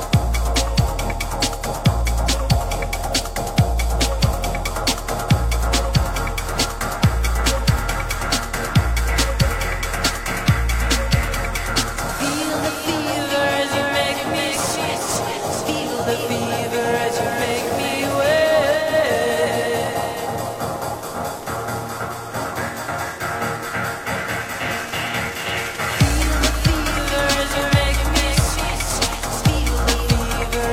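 At 18.71 s, digital radio blending to analogue: the receiver cross-fades over 265 ms to FM. Hiss rises, roughly 30 dB down. Level drops about 1 dB. Digital returns at 22.28 s.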